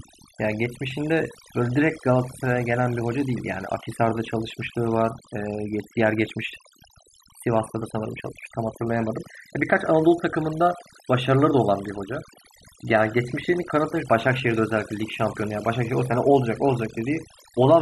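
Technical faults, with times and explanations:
Throughout: overdone noise removal. Noise reduction was pushed far too hard on this speech. Frequency bands close to the noise estimate get pulled down or shut off, taking soft parts of the voice too. Pauses drop to near silence with twinkling specks.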